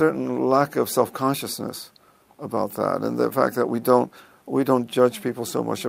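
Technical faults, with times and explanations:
Throughout, clock drift between sender and receiver: the sender's clock runs roughly 1.5% slow, so the jitter buffer keeps draining and the receiver must fill time by repeating short pieces. A waveform shows small duplicated segments joined at unevenly spaced seams across the clip.
1.24–5.59 s, repeated timing corrections: playback here is stretched to 98% speed, adding around a tenth of a second through small repeated pieces, all lengthening and unevenly spaced, heard, if at all, as small hiccups or an unsteady tempo. A spectrogram shows briefly repeated slices and slightly elongated features.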